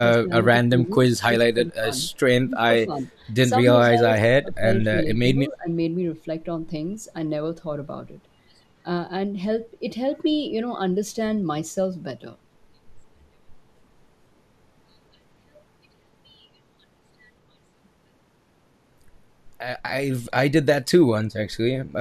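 Speech is pushed down in bursts at 0.0–0.45, 0.68–0.92, 1.24–1.85, 2.46–3.05, 3.62–4.65, 4.83–4.94 and 5.34–5.71 s, dipping by roughly 10 to 25 dB. It is likely speech suppressed in double talk: an echo canceller mistook the talker for loudspeaker echo. The waveform shows notched envelopes, and the spectrogram shows faded bands.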